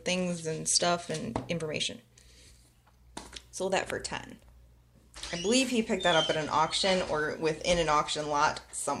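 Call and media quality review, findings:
Nothing to flag here, as no dropouts, glitches or other problems turn up anywhere in the audio.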